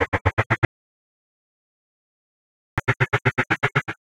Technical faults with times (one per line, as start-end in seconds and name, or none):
0.65-2.78 audio dropout to silence